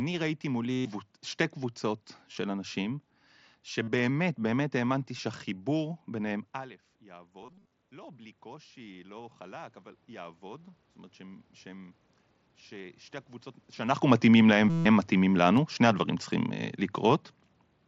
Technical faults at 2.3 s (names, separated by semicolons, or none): concealed Bluetooth headset packet loss